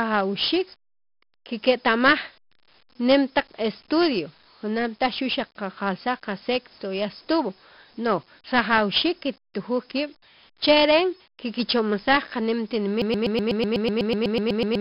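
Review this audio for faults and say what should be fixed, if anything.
4-bit ADPCM compression runs through the whole speech clip. A gritty hiss rides on every loud syllable, and sharp onsets distort where the adaptive step size cannot grow fast enough. Nothing is heard above 5.3 kHz, which points to a low sample rate and a stream near 44 kbps.

A broken-record loop runs from 13.02 s to the end. A 124 ms fragment repeats back to back 14 times, so the speech that should play in those final seconds is lost, likely because the player or stream stalled and kept resending its last fragment.

To prevent both, re-export from the original source with a better codec than low-rate ADPCM, and use a playback or streaming path that drops to silence on a stall instead of repeating its last buffer.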